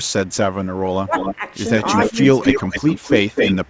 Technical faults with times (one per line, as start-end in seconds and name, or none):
0.03-0.35 echo leak
0.82-1.42 speech suppressed in double talk
1.13-1.36 echo leak
1.84-3.70 echo leak
2.09-2.16 speech suppressed in double talk